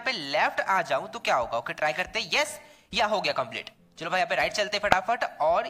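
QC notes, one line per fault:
4.91 s, corrupt frame decoded: flipped bits in a short run of compressed frames reached the decoder, which played them anyway. The misread gains and codes place energy at wrong frequencies, giving a brief, loud burst peaking near about -5 dBFS.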